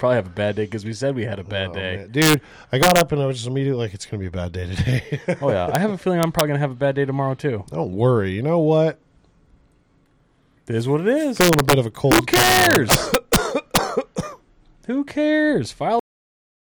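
Integer overflow: peaks pushed past the largest integer value wrap to the opposite sign instead of being limited, producing violent cracks at 2.22–2.34, 2.83–3.01, 5.75, 6.23–6.41, 11.41–11.73, 12.12–13.36 (worst, about 6 dB over) and 13.76 s. Cut-off end: the final buffers were never written, so at 16.0 s the sound stops mid-event into digital silence with no decay.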